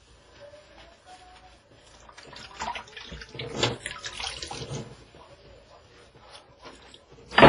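Everyday sounds, heavily damaged by what is likely WMA compression throughout. Everything above 10.5 kHz is gone, and the remaining sound rings and washes, with a hiss that swells and fades with the signal. A plain low-pass filter would leave a clean band without that breathing smear.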